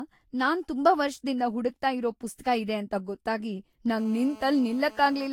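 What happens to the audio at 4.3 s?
At 4.3 s a GSM phone buzz is sounding. It starts at 3.98 s, just after "ಪುಸ್ತಕ ಇದೆ ಅಂತ ಗೊತ್ತಾಗಿ", and runs to 5.28 s. A nearby 2G handset transmits in bursts about 217 times a second, and the audio circuitry rectifies those radio pulses into a hard, raspy buzz at about 22 dB below the signal. It holds steady throughout, as in a call. Its 217 Hz pitch and dense, gritty harmonics set it apart from 50 or 60 Hz mains hum.

Underneath, the sound is swirly, smeared and hollow, with blurred attacks and nothing above 17.4 kHz. This is generation loss, likely from repeated lossy re-encoding, pointing to about five Vorbis passes at around 65 kbit/s. Each pass quantises afresh on a shifted frame grid, so artefacts pile up. The damage sounds worse than a single encode at that bitrate would leave.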